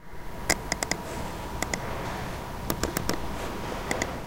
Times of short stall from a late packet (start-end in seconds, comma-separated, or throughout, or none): none